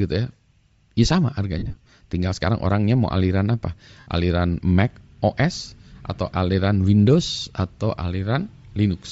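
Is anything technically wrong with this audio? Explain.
Yes. There are two problems in this speech clip: coded-speech damage throughout, and two bursts of concealed frame loss.

Bluetooth LC3 compression is the likely cause of the breathy, grainy edge that runs through the whole clip. At a low data rate the codec discards much of the upper spectrum and fills the gap with shaped noise, so the sibilants and the top end sound hissy rather than simply dull. The degree of damage fits a rate of around 32 kbps with short 7.5 ms frames. Noise filling is what separates this from a plain low-pass or a telephone band limit, where the top would be missing instead of replaced by grain.

Lost LE Audio frames occur from 1.59 to 1.92 s and again from 3.99 to 4.07 s. In the first burst, about 195 ms of audio is missing, scattered across 330 ms in short gaps of no more than about 30 ms each. The second burst loses about 68 ms of audio. 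For each missing frame the decoder repeats the last spectrum with randomised phase, so the voice turns into a brief noisy smear instead of going silent. That smear is what tells these losses apart from ordinary dropouts or clicks.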